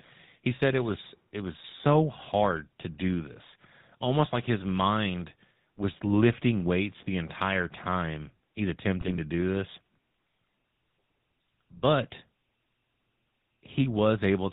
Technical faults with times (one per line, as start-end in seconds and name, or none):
0.00-14.52 GSM full-rate codec
9.01-9.19 GSM bit errors